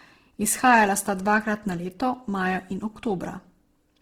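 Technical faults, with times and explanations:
Throughout, Opus compression: the speech sounds rough and grainy, with noisy texture replacing clean harmonics, though the bandwidth stays full up to 20.3 kHz. The likely cause is Opus in CELT mode filling starved bands with folded or noise energy, consistent with a rate near 16 kbps.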